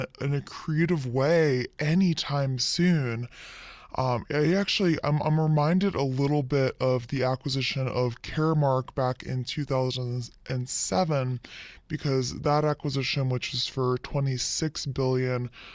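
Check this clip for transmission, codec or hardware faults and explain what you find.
There's one fault here, and it runs the whole length of the speech: a wrong sample rate. Everything plays at about 0.73 times its proper speed, and pitch drops by roughly five and a half semitones right along with it. That locked speed-and-pitch shift means the samples are being clocked out slower than they were captured, with no conversion in between. The ratio fits audio recorded at 22 kHz and played back at 16 kHz, so voices come out low and slow.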